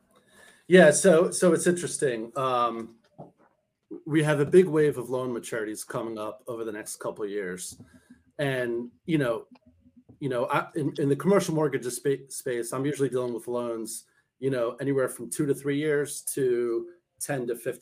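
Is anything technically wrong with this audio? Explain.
No, no technical faults.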